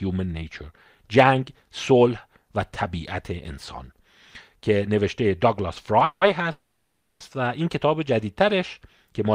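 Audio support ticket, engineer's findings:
Call audio freeze, 6.04 to 6.23 s: likely late packets draining the jitter buffer. The last sound is stretched into a fading buzz, the final 40 ms are silent, and speech resumes where it stopped, 170 ms later, with nothing lost.

Call audio freeze, 6.51 to 7.22 s: again, likely a jitter buffer underrun. The buzz fades out, 450 ms are silent, and speech picks up with no loss but 690 ms further behind.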